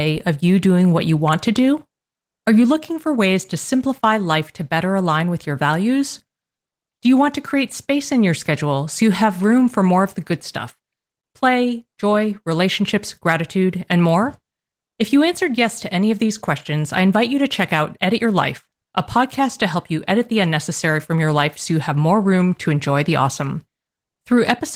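Nothing's wrong with this speech clip; it's been through Opus voice compression, and at about 20 kbps that leaves only a light touch on the sound.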